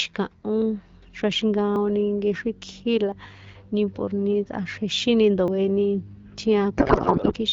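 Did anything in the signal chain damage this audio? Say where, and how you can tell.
Yes. At the driver or buffer stage, there are jumps in the speech at 1.76, 3.12 and 5.48 s, each with no silence, skipping roughly 70, 40 and 70 ms. This points to a likely dropped buffer (overrun): samples were overwritten before being collected, and the two sides were joined directly.

At the codec stage, from 6.77 to 7.33 s, the speech gives way to garbled, warbling noise that barely follows it. This is a codec payload misread. Octet-aligned AMR frames were decoded as bandwidth-efficient, so every field was read from the wrong bit positions.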